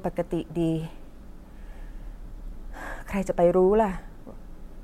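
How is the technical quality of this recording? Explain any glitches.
No technical faults are audible.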